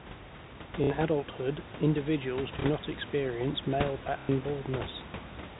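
Packet loss with the last packet repeated shows up three times: 0.84 to 0.9 s before "adulthood individuals do not", 2.61 to 2.64 s between "do" and "not experience", and 4.2 to 4.29 s after "experience". The first and last are robotic stutters, buzzing near 33 Hz, which fits 30 ms packets, and the middle one is a small blip.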